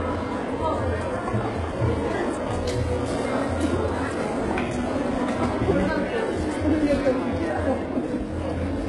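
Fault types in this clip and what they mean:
HE-AAC compression: the treble is likely rebuilt by spectral band replication rather than coded, so the top end is bright but gritty and metallic, with nothing above about 11.4 kHz. The damage is heavy, which fits a bitrate near 12 kbps. A plain low-pass would sound dull here, not falsely bright.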